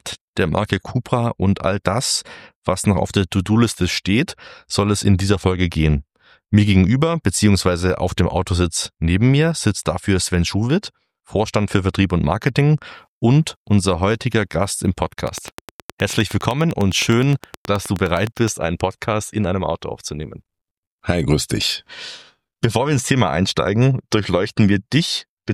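From 15.28 to 18.49 s a train of clicks runs over the sound, around thirty sharp ticks at a steady 9.7 per second, peaking about 10 dB above the audio. Their near-identical shape and even spacing likely point to interference from nearby equipment.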